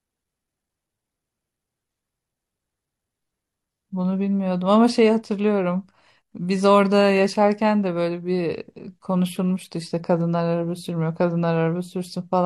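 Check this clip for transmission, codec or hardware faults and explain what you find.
No transmission, codec or hardware faults are audible here.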